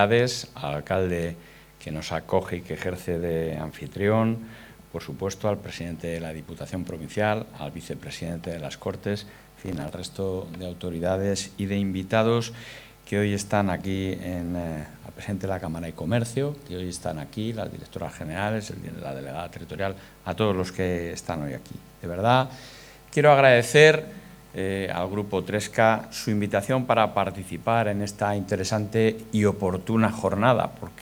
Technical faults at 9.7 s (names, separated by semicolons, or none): processor overload crackle